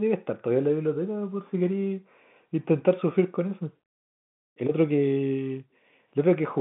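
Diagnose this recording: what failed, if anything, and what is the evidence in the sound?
Nothing stood out on listening to this speech recording, which carries the narrow band of an ordinary telephone line with no audible content above about 3.8 kHz.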